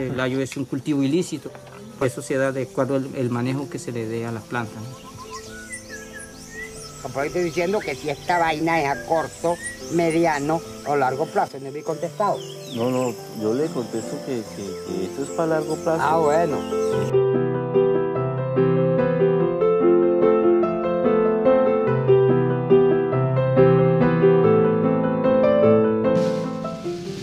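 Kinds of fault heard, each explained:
Sudden gain jump: at 11.48 s the whole signal, background noise included, drops by about 6 dB in one step and stays there until 11.86 s, with no fade in or out. This is likely a digital gain change applied without a ramp.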